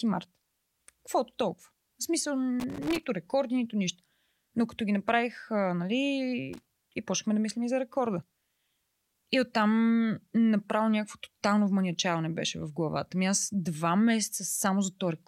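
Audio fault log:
2.60–3.05 s and 6.53–6.79 s, loose connector crackle: an irregular, scratchy burst as a worn contact rapidly makes and breaks, chopping the speech signal. Unlike evenly spaced digital clicks or a clean dropout, the spacing is random.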